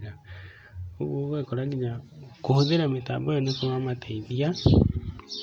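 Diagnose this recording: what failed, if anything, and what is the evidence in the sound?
Dropped samples at 2.55 s: one sharp click where the waveform skips a handful of samples, likely a driver or buffer glitch.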